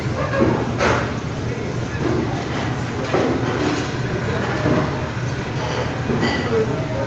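No technical faults can be heard: the audio has nothing above 8 kHz, which fits an Opus call path running at about 40 kbps behind the call's own microphone processing, and that narrowed top end is the expected result of the call chain rather than a defect.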